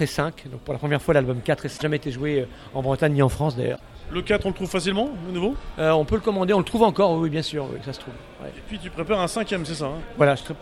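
At 1.74 to 1.82 s and again at 3.72 to 3.80 s, the sound breaks into a brief glitch lasting about 80 ms each time, the mark of damaged data in a compressed stream. Corrupted bytes made the decoder misread the frames there and lose sync until it found a valid frame header.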